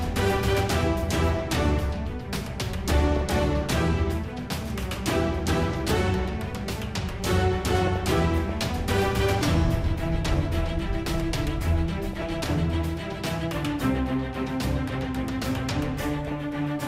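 DAB burbling appears at 3.08 to 3.42 s, 7.82 to 8.50 s, 12.13 to 12.27 s and 16.22 to 16.32 s. Weak reception let bit errors slip past correction. Damaged scale factors make single sub-bands leap in level. The result is short blips of noise in single sub-bands.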